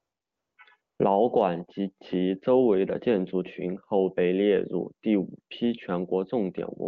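From 0.00 to 0.57 s and again from 0.81 to 0.99 s, just before "馆及其周", AMR comfort noise replaces the real background. The phone treated these stretches as silence and sent no speech frames, so the receiver synthesised a smooth, steady hiss from a rough level-and-spectrum estimate. Unlike a noise gate, which leaves true silence, this fills the gap with noise. The texture shifts audibly where the genuine wideband background returns.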